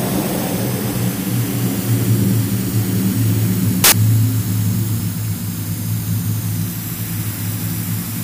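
From 3.84 to 3.92 s, a burst of loud, harsh broadband noise replaces the audio: samples built from the wrong bytes, so the fast-changing low bits become the large part of each value. Unlike a digital click or dropout, it fills the whole 80 ms with broadband noise.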